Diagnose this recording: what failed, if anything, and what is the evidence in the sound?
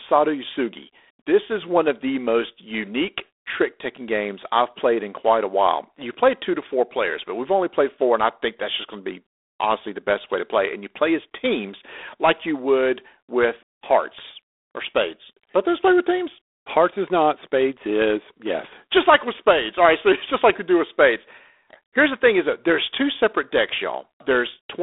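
The failure is at the codec stage. The speech has passed through G.726 ADPCM at a low rate, and the damage runs the full length of the recording. Everything sits in a telephone band of roughly 300 Hz to 3.6 kHz, with nothing above 3.8 kHz. A harsh, rasping hiss rides on the speech and rises and falls with its level, which fits 24 kbit/s. At that rate each sample carries only 3 bits describing its difference from an adaptive prediction, so the quantisation error is coarse enough to hear.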